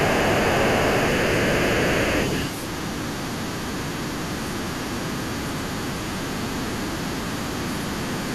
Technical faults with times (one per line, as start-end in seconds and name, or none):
0.00-2.48 other side's voice leaking through
0.53-0.64 speech suppressed in double talk
4.31-4.36 other side's voice leaking through
5.06-5.22 other side's voice leaking through
5.54-5.92 other side's voice leaking through
6.36-6.51 speech suppressed in double talk
8.10-8.34 other side's voice leaking through